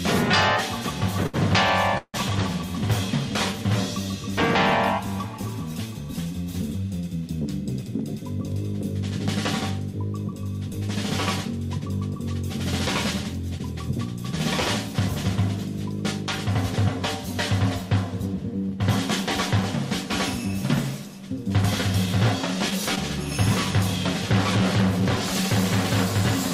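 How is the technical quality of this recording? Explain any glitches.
Two network glitches are audible. The remainder receives no verdict.

From 1.23 to 2.16 s there are repeated stalls (stutter). Packets arrived late three times and the receiver extended the last sound for 245 ms, up to 163 ms at once, so the audio drags without losing anything.

From 21.81 to 22.98 s there are scattered short gaps. About three lost or late packets, each roughly 15 ms or shorter, were patched by continuing the sound, leaving brief ticks and 20 ms missing.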